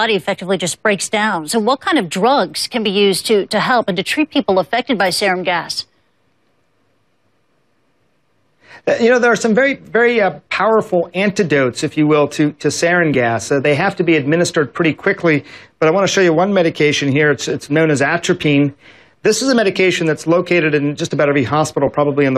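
Single Bluetooth LE Audio frames were lost at 13.14 s and 21.87 s, and the LC3 decoder patched each 10 ms gap with a sign-scrambled spectrum, leaving a brief noisy smear.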